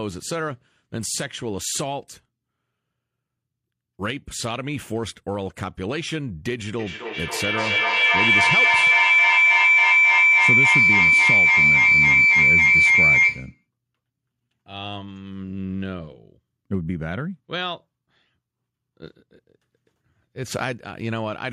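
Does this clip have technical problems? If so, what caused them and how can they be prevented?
Yes. Feedback howl from 6.79 to 13.66 s: two devices in one room are on the same call, and the microphone-to-loudspeaker loop gains level on each pass. It narrows to a tone around 2 kHz, peaks about 11 dB above the speech and repeats roughly every 300 ms around the loop. On a spectrogram it shows as a bright horizontal band near 2 kHz, and the waveform swells into a dense block. Prevent it by joining from only one device in the room, or by muting the second device's microphone and speaker.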